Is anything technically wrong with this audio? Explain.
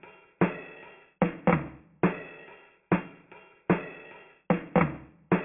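No, nothing here sounds technically wrong; it all comes through just fine.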